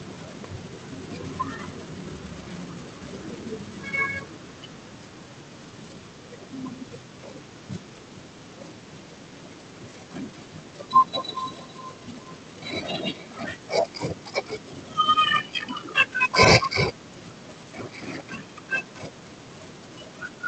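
From 8.82 s to 13.48 s the speech is followed by a feedback echo between two devices. A second device on the same call replays the audio, and the first microphone picks it up again. Its echo canceller only removes its own playback, so the return gets through. The repeat arrives roughly every 0.4 s, peaking about 19 dB below the speech, with the thin top end of a call path limited to around 8 kHz.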